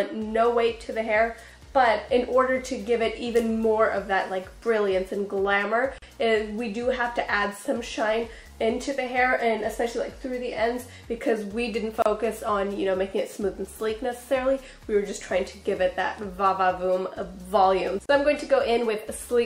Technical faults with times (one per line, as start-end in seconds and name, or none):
5.98-6.02 gap at a join of encoded pieces
12.02-12.06 gap at a join of encoded pieces
18.06-18.09 gap at a join of encoded pieces